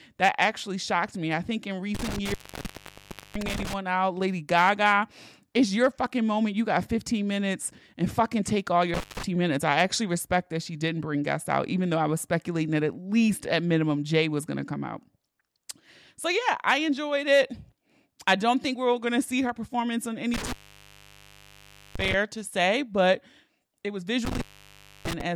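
Intermittent contact interrupts this speech at 1.95–3.74 s, 8.94–9.23 s, 20.34–22.14 s and 24.25–25.21 s: a loose cable or plug briefly opens, dropping the signal for about 1.01, 0.17, 1.43 and 0.64 s, with crackle at each break and faint hiss underneath.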